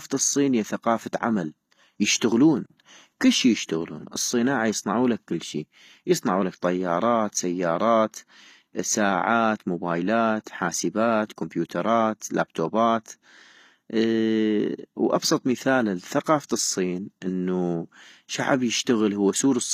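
A speech recording with plainly audible HE-AAC compression throughout, likely from a low bitrate near 24 kbps: replicated treble sounds gritty and metallic, and a spectrogram shows copied, smeared upper bands stopping flat at 14.9 kHz.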